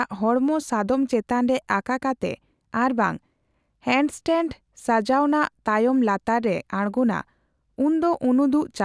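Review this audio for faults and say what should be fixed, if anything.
No faults found on review of the speech; nothing to fix.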